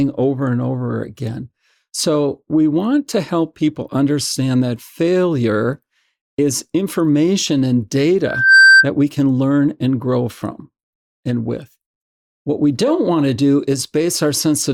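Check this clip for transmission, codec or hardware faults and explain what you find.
One fault is present: a loudspeaker feedback squeal from 8.24 to 8.88 s, right after "failure is information and". A microphone re-captures its own loudspeaker, and at 1.6 kHz the loop gain tops unity, so a pure tone swells over about a third of a second to roughly 10 dB above the speech.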